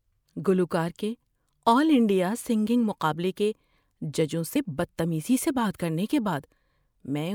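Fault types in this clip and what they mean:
Compressed frames skipped: at 4.55 s, speech jumps ahead about 50 ms, fitting two lost 24 ms frames.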